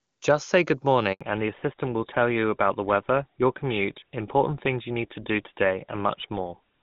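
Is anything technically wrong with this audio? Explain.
Yes, there are two faults, both from the call changing networks.

A handover gap runs from 1.13 to 1.21 s, just after "say good". While the call switched networks, no speech frames arrived for about 80 ms, so the sound cuts off abruptly and leaves a short hole where that stretch of audio is lost.

A fallback to narrowband follows from 1.21 s to the end. The call dropped out of HD Voice, whose wideband sound before the gap is clean and consistent with the highest AMR-WB rate, into an older narrowband codec, most likely GSM full rate. Nothing above 4 kHz survives, so the sound becomes duller and rougher.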